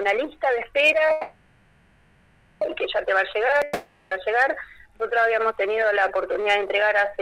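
At 1.11 s a call audio freeze begins. A fading buzz fills 1.5 s, up to 2.63 s, then the sound resumes where it stopped, likely after delayed packets emptied the jitter buffer.

A long network dropout runs from 3.63 s to 4.13 s. A fading buzz covers about 0.48 s. The audio returns further on, that stretch lost, likely through missing packets.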